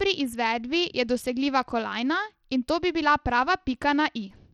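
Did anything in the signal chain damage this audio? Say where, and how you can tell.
Yes. Throughout the speech the treble flickers in and out and a gritty, aliased grain rides on the sound, plainly audible from start to end. This is likely Bluetooth SBC compression at the codec stage, where a small bit pool starves the upper sub-bands and coarsely quantises the rest, which fits a bitrate near 80 kbps.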